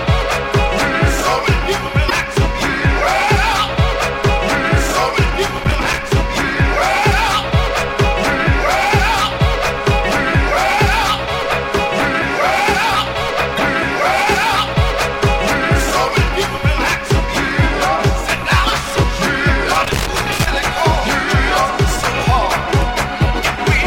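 At 2.08–2.12 s a brief glitch marks damaged data in a compressed stream: corrupted frames break decoder sync until the next header. Loose connector crackle follows at 5.48–5.98 s, irregular scratching from a contact chopping the signal. The stream corruption recurs at 13.55–13.59 s, and the crackle returns at 19.75–20.47 s.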